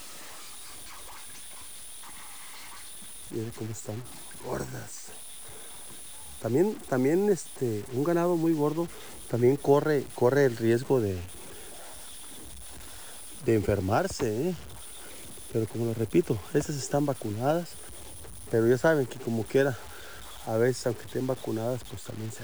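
Throughout, the audio has low bit depth without dither, likely from truncation to about 6 bits. The error follows the signal at roughly 20 dB below it, heard as grit on quiet sounds or hiss in dense ones. A spectrogram shows a signal-tracking noise floor; the waveform looks stepped.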